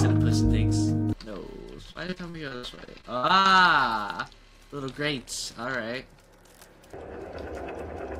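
From 1.91 to 3.57 s there's repeated packet loss: a rapid run of dropouts, each patched by extending the last sound, so it turns choppy and robotic, with gaps up to 77 ms.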